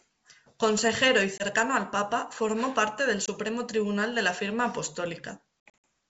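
At 1.38 to 1.43 s and 3.26 to 3.30 s, the speech drops into short, hard-edged silences. Each loses about 20 ms, which fits a single missing packet. This is packet loss on an ADPCM call. The gap is filled with silence. The decoder's predictor and step size then no longer match the sender's. Speech returns with brief, slight distortion. From 5.68 to 5.83 s, 160 ms is lost across 240 ms, with the longest hole 60 ms. That fits roughly seven packets.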